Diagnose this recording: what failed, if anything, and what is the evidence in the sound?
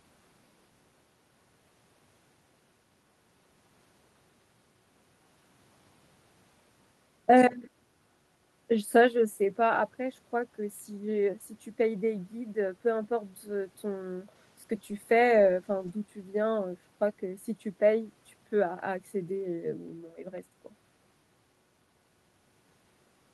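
Nothing stood out on listening to this speech recording that would point to a failure at any stage of the chain.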